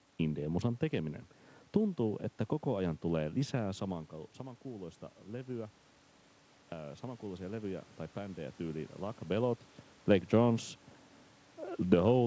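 Speech over a call with one fault, automatic gain rising from 6.71 to 8.95 s. The gain control reacted to the input dropping by about 12 dB and raised its gain by about 4 dB, so the voice and the room noise swell together.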